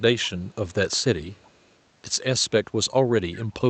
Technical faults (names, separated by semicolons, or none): echo leak